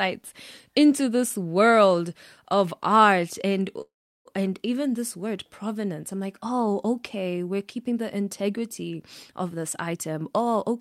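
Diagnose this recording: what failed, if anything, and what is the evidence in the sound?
A call audio freeze sits at the network and jitter-buffer stage, from 3.81 to 4.27 s. The last sound is stretched into a short buzz that fades, then roughly 350 ms of silence, and speech resumes where it left off. Nothing is lost, but about 440 ms of delay is inserted. On a spectrogram the final harmonics smear flat and fade to an empty band; the waveform shows a decaying tail, then near-zero. The likely cause is packets held up in transit.

A jitter buffer speed-up follows from 8.97 to 9.94 s, again at the jitter-buffer stage. The receiver had more audio queued than it wanted and trimmed pitch-period-sized pieces repeatedly, so this stretch plays about 6% fast, around 70 ms shorter overall, with pitch unchanged. The speech sounds slightly hurried. A spectrogram keeps the same harmonic spacing but shows compressed syllable durations, and the waveform carries many small splices between pitch cycles.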